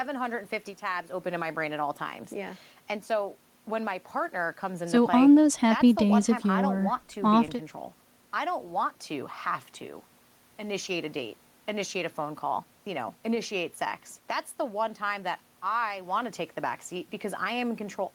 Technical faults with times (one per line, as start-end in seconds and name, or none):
none